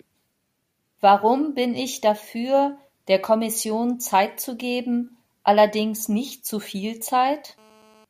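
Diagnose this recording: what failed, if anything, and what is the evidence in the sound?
GSM signalling bursts from 6.65 to 7.60 s, in the analogue wiring: a galloping run of ticks and brief 217 Hz buzzes, roughly 30 dB under the speech. A nearby 2G phone was signalling, and the audio circuit rectified its short radio burst groups.

GSM phone buzz from 7.60 to 8.05 s, also in the analogue wiring: a hard, raspy, harmonic-rich buzz at 217 Hz, about 32 dB below the speech and unrelated to it. The phone had entered a call, and its continuous bursts were demodulated into audio.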